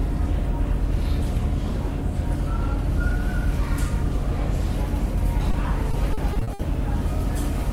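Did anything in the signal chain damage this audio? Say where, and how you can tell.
Yes, at the network stage. At 5.51 to 5.55 s there is a brief smear where about 20 ms of audio is missing. This is short concealed packet loss: that data arrived too late, so the decoder extended the preceding sound to fill the hole and then blended back into the real signal.

From 5.91 to 6.61 s the sound turns choppy, with six separate dropouts, the longest 60 ms. This is repeated packet loss, heard as robotic sound. About 200 ms, roughly 29% of that stretch, was patched by continuing the last sound, and each patch was followed soon after by another gap.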